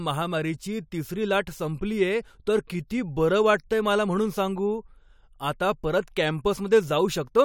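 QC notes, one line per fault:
No technical faults are audible anywhere in the speech recording.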